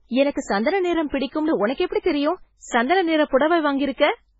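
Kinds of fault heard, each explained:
MP3 compression: The speech is heavily damaged throughout, and nothing is heard above 7.7 kHz. Weak frequency lines switch on and off between frames, giving a watery, swirling texture. The damage fits a very low bitrate around 16 kbps, likely from MP3 encoding.
Pre-echo: Just after "சந்தன நிறம்", from about 1.10 to 1.12 s, a short hiss runs ahead of a sharp onset. Quantisation noise from the loud part has spread back over about 27 ms of quiet. The attack sounds soft and smeared.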